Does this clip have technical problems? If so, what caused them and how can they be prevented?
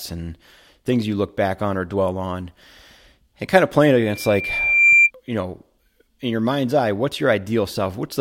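Yes: a loudspeaker feedback squeal from 4.01 to 5.11 s, a 2.4 kHz tone as the microphone re-amplifies its speaker. It swells over about a second to roughly 10 dB above the speech, unlike a steady interference whistle. Keeping the microphone away from the loudspeaker, or lowering its gain, prevents it.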